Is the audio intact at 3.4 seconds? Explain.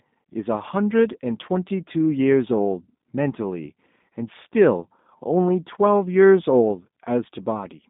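No. At 3.4 seconds the speech carries G.729 codec damage, present for the whole clip rather than starting there. The codec models each 10 ms frame with a vocal tract filter, a pitch predictor and a few pulses, which fits an 8 kbit/s stream, and only a band of roughly 150 Hz to 3.7 kHz survives. The voice sounds muffled, slightly rough and synthetic, with the coding artefacts plainly audible.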